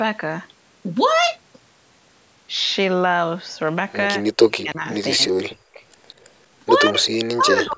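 From 4.27 to 4.86 s, 5.14 to 5.8 s, 6.9 to 7.05 s, and 7.33 s to the end, the speech drops sharply, by about 35, 40, 20 and 40 dB. The pattern is likely speech suppressed in double talk, where the echo canceller turns down the near talker along with the loudspeaker echo while both sides speak. The voice sinks, and the band of the call's microphone processing, which passes nothing above 8 kHz, is normal.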